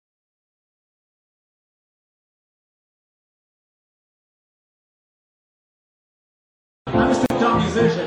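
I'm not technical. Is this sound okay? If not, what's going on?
No. Near the end, at about 7.26 seconds, the sound suddenly drops out for roughly 40 milliseconds, a tiny hole with blurred edges, then picks up exactly where it left off. This is a gap at a join of encoded pieces: the audio was compressed in separate chunks and stuck back together without trimming the bits of silence the encoder adds at each chunk's edges.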